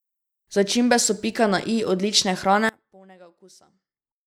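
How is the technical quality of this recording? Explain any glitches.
The recording has one clear fault. From 2.69 s to the end, right after "pika na i odlične", the speech collapses to a faint residue, about 28 dB quieter. The likely cause is one channel inverted: with reversed polarity, the centred voice cancels when the two channels sum to mono.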